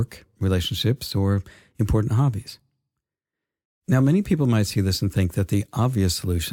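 Nothing goes wrong anywhere in this bit of speech, so there's no technical fault to point to at any moment.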